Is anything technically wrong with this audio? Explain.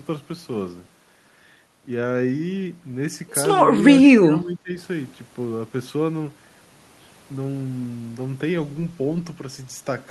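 Yes. From 4.1 to 4.76 s the speech sinks sharply, by roughly 20 dB at its deepest, for about two-thirds of a second. This is speech suppressed in double talk: an echo canceller, likely confused by both sides talking at once, turned the near talker down with the echo.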